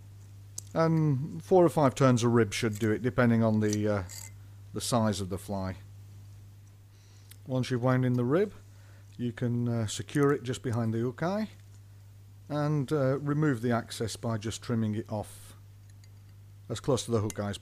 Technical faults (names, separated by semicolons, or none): none